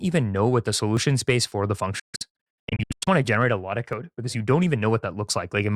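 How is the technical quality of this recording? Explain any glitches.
The recording has three glitches, two short skips and one stretch of broken-up audio, so its technical quality is compromised.

At 0.97 s, after "even know what the", and again at 3.93 s, after "generate a lot of", the speech jumps ahead by roughly 10 ms. This is likely a dropped buffer (overrun): samples were overwritten before being read, so the two sides join directly. The waveform shows a sudden discontinuity and the spectrogram a thin vertical broadband line, with no gap.

From 1.99 s to 3.08 s, between "space for the" and "want to generate a", the audio repeatedly cuts to silence, about 673 ms lost over 1.07 s, the longest hole 139 ms. This fits a Bluetooth dropout, where late packets were discarded. The waveform shows flat, abrupt-edged gaps, and the spectrogram shows blank vertical bands.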